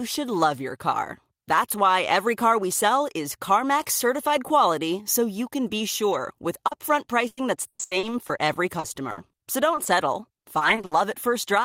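Just after "can be sure with", from 6.67 to 6.73 s, the speech briefly smears, a short blur where the sound seems stretched rather than spoken. This is short concealed packet loss: about 40 ms of the call arrived too late for the decoder, so the receiver kept the previous sound going, extending its pitch or noise shape, and then blended back into the real signal.

From 7.27 to 9.87 s the speech turns choppy and robotic, with pieces of sound dropping out. This is repeated packet loss. Twelve separate holes, totalling 560 ms and covering about 22% of the stretch, were each patched by continuing the last sound before the next one arrived. The longest gap lasts 120 ms. The same choppy, robotic quality returns from 10.33 to 10.93 s. Six holes totalling 200 ms are concealed there, about a third of the span, none longer than 60 ms, so the breaks are shorter but more densely packed.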